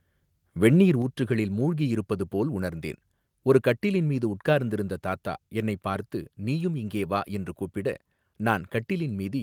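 At 1.02 s the speech and the background behind it drop together in one sudden step of about 4 dB, just before "ஊற்றுகளில் மூழ்கி இருப்பது போல்". This is a microphone volume stepped down, likely the call software lowering the device's input volume after judging it too loud.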